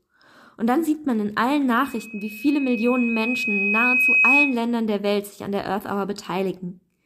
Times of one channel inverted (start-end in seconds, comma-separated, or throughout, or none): none